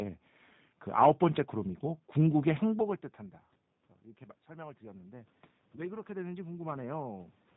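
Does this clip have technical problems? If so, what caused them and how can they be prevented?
Yes. The speech has been through the G.729 codec for its whole length. The roughness, slightly synthetic buzz and dull top with nothing above 4 kHz point to the 8 kbit/s G.729A coder. It rebuilds each 10 ms frame from a vocal tract filter, a pitch predictor and a few pulses. That also sets it apart from the call microphone processing, which only takes out the lowest bass. Using a wideband codec such as Opus or G.722 would prevent it.

Automatic gain rising runs from 4.18 to 7.36 s. The input level fell by about 21 dB, and the gain control raised its gain by about 8 dB over those three seconds, so the speech and the room noise swell together. That shared swell in the background distinguishes it from the talker moving at about 2.5 s, where only the voice level changes. A slower or capped AGC, or a steadier input level, would prevent it.

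VoIP packet loss concealed by the speech codec occurs from 5.76 to 5.82 s. One 20 ms packet went missing, and the decoder extrapolated from its last pitch and filter, stretching the sound into a brief buzzy tone or coloured noise that fades. Because each frame builds on the one before, the speech stays weakened for tens of milliseconds or more after the gap, which distinguishes this from a plain dropout or an abrupt click. A jitter buffer, forward error correction or a more stable network would prevent it.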